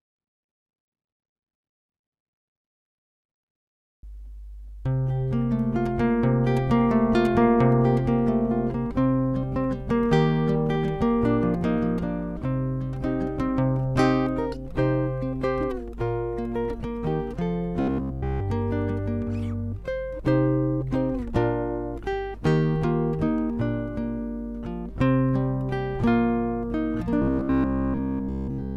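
Two stretches of the audio, 17.80 to 18.42 s and 27.22 s to the end at 28.76 s, collapse into a rigid, metallic buzz at about 66.7 Hz, essentially all of it repeated material. This is likely robotic sound from repeated short buffers, with one 15 ms block looped while incoming audio was skipped.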